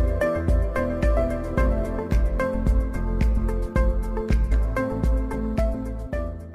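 At 4.51 s the audio jumps abruptly forward, with a brief blip marking the join, and whatever should have followed that point never arrives. This is most likely a stream segment skipped: one chunk of a segmented stream failed to load, and rather than stall, the player moved straight on to the next segment. The missing stretch is simply gone, so the sound on either side of the jump doesn't connect.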